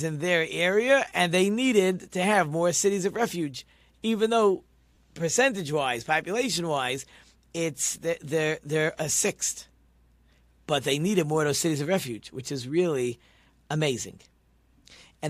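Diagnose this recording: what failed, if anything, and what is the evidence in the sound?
What failed is the Bluetooth link: lost LE Audio frames at about 4.95 to 4.97 s in this speech. You hear a brief 20 ms patch where the sound goes smeared and noisy rather than dropping cleanly. That fits two 10 ms frames going missing over the air. The LC3 decoder, likely running at light compression, papers over the hole by reusing the last spectrum with random signs. The gap is too short for the fade to silence to kick in, so it's just a grainy blip.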